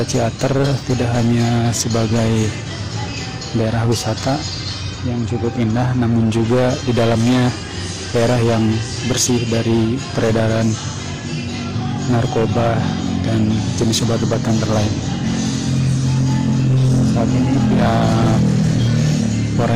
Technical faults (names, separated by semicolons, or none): hard clipping